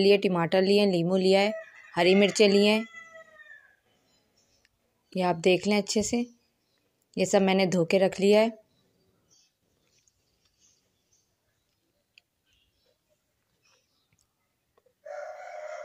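Nothing goes wrong anywhere in this clip; there's no dropout, glitch or distortion to point to at any moment, so there's simply nothing to flag.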